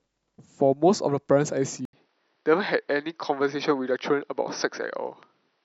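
At 1.85 s there's a short gap, about 80 ms, and from there to the end the speech sounds duller, with nothing above roughly 6 kHz and a faint new hiss sitting around 50 dB below the voice. Loudness barely changes, so it isn't a gain jump. Most likely the input switched to a poorer device partway through, such as another mic or a headset's call profile, which passes a narrower band and brings its own noise floor.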